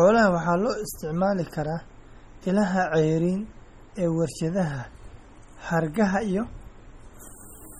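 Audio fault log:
Throughout, MP3 compression: the speech sounds watery and swirly, with metallic chirps on s sounds and smeared onsets, and nothing is present above 19.6 kHz. The damage is heavy and fits a low bitrate of around 32 kbps. The likely cause is an MP3 encoder that ran short of bits and zeroed weak frequency lines. Those lines flicker on and off from frame to frame, which produces the swirl and chirps.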